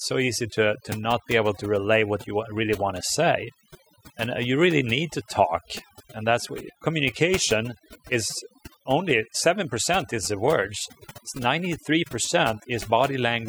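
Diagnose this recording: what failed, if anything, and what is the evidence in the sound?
Overdone noise removal, throughout the speech. Background drops and breaks up into twinkling specks. The over-strong suppressor gates bands near its noise estimate.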